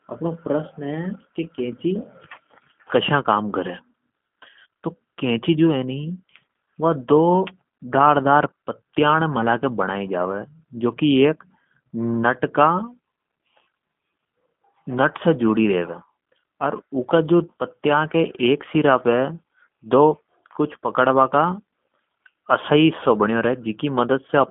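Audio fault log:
throughout, G.729 codec: speech is rebuilt at 8 kbit/s from a vocal tract filter and sparse pulses, so it sounds rough and synthetic, with nothing above 3.5 kHz.
18.88–18.94 s, hard clipping: a peak just reaches the stage's limit and is cut flat, adding high harmonics heard as a brief crackle lasting about 50 ms.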